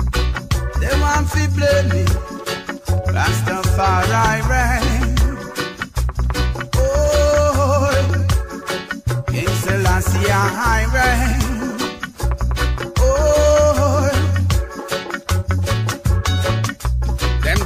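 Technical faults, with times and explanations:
No technical faults detected in the clip.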